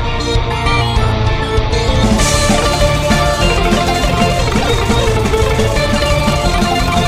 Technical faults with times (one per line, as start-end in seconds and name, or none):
4.04-7.07 time-stretched section